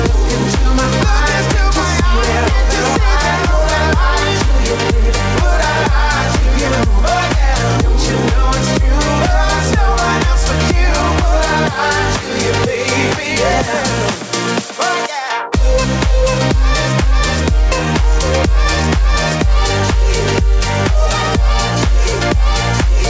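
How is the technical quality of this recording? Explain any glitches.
No glitches can be heard in this recording.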